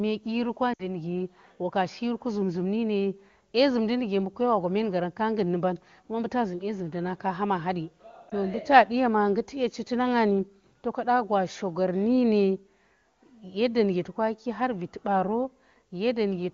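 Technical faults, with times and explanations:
0.74–0.88 s and 8.29–8.34 s, lost AMR speech frames: At 0.74 s about 60 ms drops out, which fits three consecutive 20 ms frames failing their checksum. The decoder repeats the last good pitch and vocal tract settings at falling gain, so the sound drops to near silence within two frames, as wideband concealment does. After "na kaha ma hadi" a single 20 ms loss gives only a brief dip. Unlike a plain dropout, the sound does not cut off abruptly but decays briefly first.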